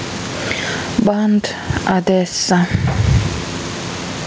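Throughout the speech, the gain swings by around 20 dB, so loud and quiet passages sit squashed together. This gain pumping likely comes from input gain set far too high, with a fast limiter or compressor clamping down on each peak. The call path's G.722 coding leaves nothing above 8 kHz.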